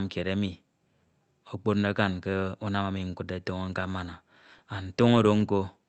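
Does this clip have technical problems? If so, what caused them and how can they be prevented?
Yes. Clock drift between sender and receiver: throughout the clip the pacing feels faintly unsteady, because the sender's clock runs roughly one and a half percent slower than the receiver's, so the jitter buffer keeps draining. Adaptive resampling at the receiver, which tracks the sender's real clock rate, prevents this.

Repeated timing corrections: from 0.66 s, just after "kied emi", to 5.57 s, small uneven corrections stretch the speech to 99 percent speed. The receiver repeats short pieces to refill its buffer, adding around 70 ms in total. Smooth time-stretching, or locking both ends to a common clock, prevents these corrections.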